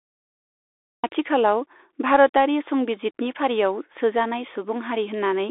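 From 0 to 1.04 s there is digital silence, then the speech enters abruptly, mid-sound with no natural attack. This is a cut-off start: capture began late. On the waveform the trace sits dead flat, then jumps straight to signal at 1.04 s.

Throughout, the speech carries Bluetooth CVSD headset codec damage, plainly audible. The one-bit delta modulator's adaptive step can't keep up with loud, high-frequency content, so sibilants sound scratchy over a grainy hiss, which fits 64 kbps CVSD. A spectrogram shows energy roughly 300 Hz to 3.6 kHz and nothing above 3.8 kHz.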